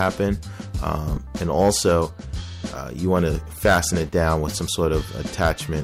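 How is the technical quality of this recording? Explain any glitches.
There is one glitch, at 1.14 to 1.17 s. It is damaged data in a compressed stream. The bytes for that short stretch were corrupted, so the decoder lost sync and hunted for the next valid frame. The audio breaks for about 36 ms.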